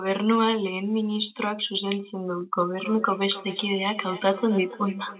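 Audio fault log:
2.61–5.19 s, feedback echo between two devices: from 2.61 s to the end, the speech comes back around about every third of a second, peaking at about 16 dB below the direct sound. Another device in the room is playing the call back into this microphone, and the local echo canceller can't remove audio it didn't play itself. The repeats sound thin and a bit ringy, partly because the call path's narrowband coding means nothing reaches above 4 kHz.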